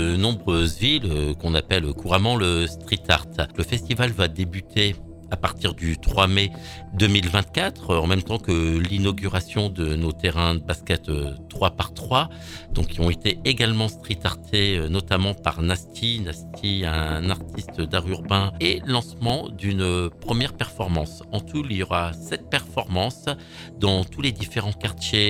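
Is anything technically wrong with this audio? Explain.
Yes, there are two tiny underruns with held sample, at 7.84 s and 19.29 s. The buffer ran dry, so the output froze flat for about 1.5 ms, a 64-sample gap, and about 1.5 ms of audio was lost each time.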